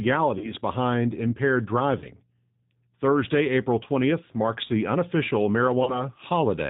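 From the start, the speech carries G.729 codec coloring. The codec rebuilds each 10 ms frame from a vocal-tract filter, a pitch predictor and a few pulses, so the voice sounds slightly rough and synthetic, and the damage is plainly audible. The sound is consistent with the 8 kbit/s G.729A variant. A spectrogram shows nothing above 4 kHz, with a hard ceiling across the whole clip and grainy, smeared formant detail below it.

VoIP packet loss concealed by the speech codec occurs three times. The first runs from 0.38 to 0.54 s, just before "behind impaired". The second runs from 1.99 to 2.07 s, just after "behind impaired". The third runs from 5.84 to 6.09 s, following "marks the unofficial". Each gap fits a single lost packet of about 30 ms. The decoder filled it by repeating its last pitch and filter at falling gain, which produces a brief stretched sound, a buzzy tone or coloured noise, that fades. 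Because each frame builds on the one before, the voice stays weak or distorted after the gap. In the waveform this appears as a short, decaying stretch followed by reduced amplitude. In the spectrogram, flat, static energy replaces the normal speech movement.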